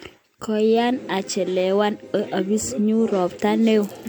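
Speech with generation loss running the whole way through: it has that swirly, hollow smear and softened consonant attacks you'd not expect from roughly 100 kbit/s MP3 alone, which points to around seven lossy passes likely stacking up, with nothing above 20.1 kHz.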